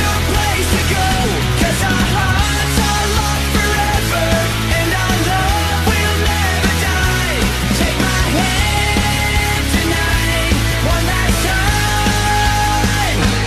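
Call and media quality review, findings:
Brief blip at 1.23 s. Damaged data in the compressed stream; decoder misreads corrupted frames, loses sync, resyncs on the next frame header.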